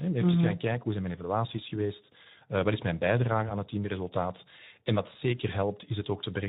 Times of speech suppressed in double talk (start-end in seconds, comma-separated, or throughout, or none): none